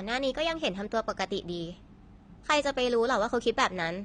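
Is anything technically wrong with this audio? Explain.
Yes. AAC compression is audible throughout the speech, and its likely cause is a low-bitrate AAC-LC encode, the damage fitting something near 32 kbps. At that rate the encoder spends too few bits on each block of frequency lines, so it drops the top of the spectrum and lets detail fall into gaps. The speech sounds dull and smeared, with a watery warble on held vowels and a fizzy, brittle edge on sibilants.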